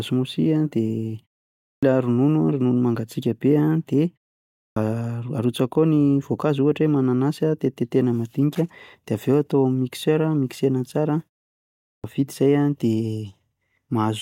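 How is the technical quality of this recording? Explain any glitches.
The speech has a recurring glitch: clipped starts after a pause at 1.67 s, 4.58 s and 11.86 s. Each time, the output device sleeps during the silence and is slow to wake, so roughly 0.16 to 0.18 s of speech is lost and it begins abruptly.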